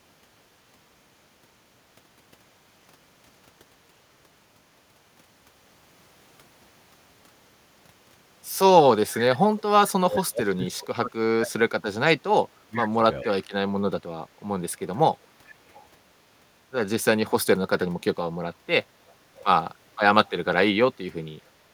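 Echo leak first appears at 9.57 to 9.62 s, a brief delayed copy of the speech trailing about 438 ms behind and sitting some 25 dB under it. It returns at 13.23 to 13.28 s (about 20 dB down), 15.22 to 15.88 s (about 30 dB down), 19.08 to 19.44 s (about 25 dB down) and 20.26 to 20.3 s (about 35 dB down). The steady 438 ms lag points to loudspeaker sound reaching a far-end microphone and likely slipping past an echo canceller that did not remove all of it, coming back as faint ghost fragments.

Speech suppressed in double talk runs from 10.05 to 13.35 s, where the speech sinks, at its deepest by roughly 30 dB, across about three seconds in total. With both ends active at once, the canceller likely could not tell the local talker from returning echo and clamped down on everything, so the speech dips. One of the echo scraps, at 13.23 s, lands right at the close of this stretch.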